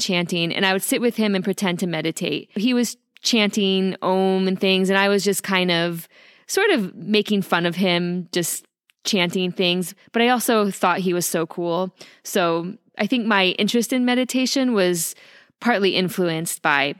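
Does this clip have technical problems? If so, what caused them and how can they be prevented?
No, this speech recording has no technical problems. With nothing gone wrong, there is no cause to trace and nothing to prevent.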